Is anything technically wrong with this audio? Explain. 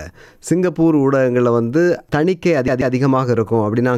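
Yes. From 2.68 to 2.95 s the audio stutters: a fragment of about 136 ms plays twice in quick succession, with a brief mute at each jump, giving the fast, even hiccup of a skipping disc. This is a CD stuck on one turn. A scratch makes the laser fall back one track at the same point on every rotation, so the same short slice of audio repeats before playback carries on.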